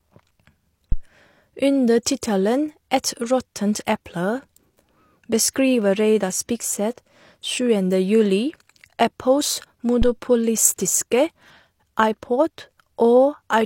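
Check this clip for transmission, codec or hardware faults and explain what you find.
The speech clip has one hardware fault, occurring twice. Phantom power thump at 0.92 to 1.03 s and 10.02 to 10.15 s: a supply switched on a live input pushes a voltage step through the coupling capacitors, heard as deep thumps decaying over 25 and 30 ms.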